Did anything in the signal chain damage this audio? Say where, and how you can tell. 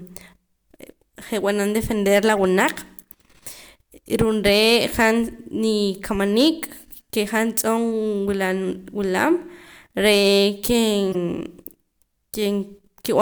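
Yes. A corrupt frame was decoded at 2.36 s and again from 11.12 to 11.15 s, a codec-stage fault. Each is brief, the first a single frame near -25 dBFS, the second about two frames and louder near -15 dBFS. Flipped bits misdirected energy in frequency.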